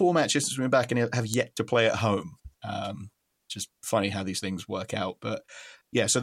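At 1.34 s, between "back and have" and "to play at home", a sharp snap rises to about -5 dBFS, most likely an electrical switching spike: a nearby switch arc coupling into the line. It sits on top of the speech, which carries on unbroken, unlike a dropout click.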